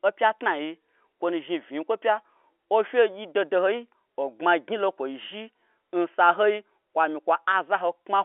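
No technical faults can be heard anywhere in this speech clip.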